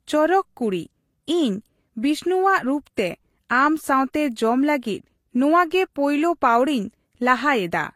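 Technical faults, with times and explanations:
throughout: transcoding between lossy codecs. The speech carries two kinds of coding damage at once: a smeared, synthetic-sounding top band together with warbly, swirling artefacts, and nothing above 16.5 kHz. A single low-bitrate encode would show one of these, not both. The likely cause is low-rate HE-AAC re-encoded to Vorbis.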